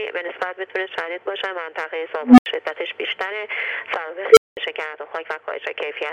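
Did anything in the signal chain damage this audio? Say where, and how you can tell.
Yes, there is an unstable filter in the processing stage. Tones near 300 Hz at 2.23–2.46 s and 500 Hz at 4.32–4.57 s swell over 147 ms and 49 ms, clip, then fall silent for 80 ms and 200 ms. That is runaway recursion overflowing until the filter resets. The waveform shows an envelope exploding until it clips, and the spectrogram shows a bright horizontal line ending in a blank gap.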